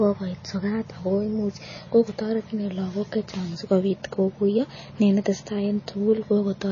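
Right from the start and all the way through, the speech carries what is likely MP3 compression, and it's plainly audible. Nothing comes through above about 7.1 kHz, so the encoder has lopped off the treble to save bits, which fits a very low bitrate of around 24 kbps. With so few bits, weaker frequency lines get dropped and return from frame to frame, giving the voice a watery, swirly texture and dulling its sibilants.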